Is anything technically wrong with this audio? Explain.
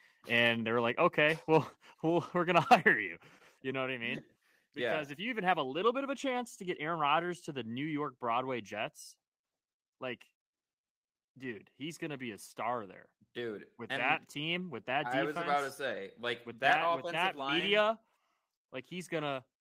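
Yes. At 1.53 to 1.58 s, and again at 2.56 to 2.74 s just after "we're going", the loudest moments take on a harsh, crackly edge with flattened peaks. This is microphone overload, likely from the input level sitting too high, so the waveform tops run into the converter's ceiling, here by about 3 dB. Only a small fraction of samples, roughly three percent, are cut off, but that is enough to add a gritty buzz.

The level also drops abruptly twice, with the voice and background falling together. The first drop, by about 3 dB, comes at 2.1 s, just before "we're going". The second, by about 4 dB, comes at 2.74 s, right as the second distorted stretch ends. This is the microphone volume stepping down, likely the call software reacting to a too-hot signal by lowering the device's input gain in a single jump rather than a smooth fade.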